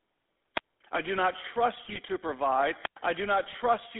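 A short speech recording runs through a GSM full-rate codec throughout, with a buzzy, gravelly roughness consistent with a 13 kbps GSM coder, and a spectrogram confined to roughly 250 Hz to 3.5 kHz. Wireless microphone squelch dropouts hit at 0.55 to 0.64 s and 2.81 to 2.98 s. A fading radio signal brings up brief hiss before the receiver mutes, leaving flat waveform gaps of about 61 ms and 108 ms. GSM bit errors at 1.84 to 1.98 s and 3.46 to 3.55 s break the voice into squawks and gargling as corrupted filter and gain values distort frames, visible as smeared, blotchy spectral bursts and abrupt level spikes.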